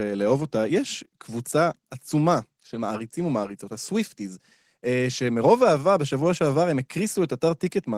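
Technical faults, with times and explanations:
No technical faults can be heard anywhere in this recording.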